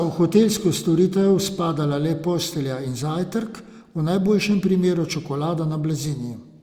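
No technical faults can be heard anywhere in this recording.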